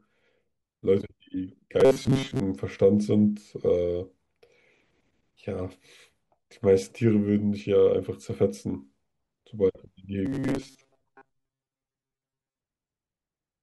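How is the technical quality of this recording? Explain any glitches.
Robotic sound from repeated short buffers appears twice, from 1.80 to 2.40 s and again from 10.26 to 12.58 s. Both times the speech collapses into a rigid, metallic buzz fixed at 134 Hz that only loosely tracks the words. The likely cause is audio arriving too seldom, so a fragment of roughly 7.5 ms is looped to fill the gaps while most of the real signal is skipped, and that loop rate becomes the imposed pitch.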